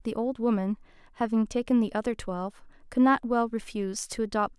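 Nothing goes wrong anywhere in this bit of speech, so there's no technical fault to point to at any moment.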